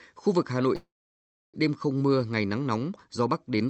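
From 0.75 to 1.56 s the speech halts in a call audio freeze. The last sound stretches into a fading buzz or hiss, then goes silent for 650 ms, likely because delayed packets emptied the jitter buffer. Unlike a dropout, it resumes intact at "đêm không", with nothing skipped.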